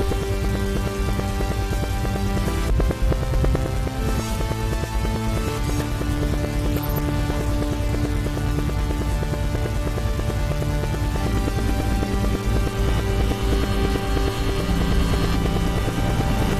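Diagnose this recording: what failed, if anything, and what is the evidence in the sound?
Damaged data in a compressed stream at 11.82 s, at the codec stage: corrupted bytes make the decoder misread frames and lose sync, producing a brief disturbance in the sound.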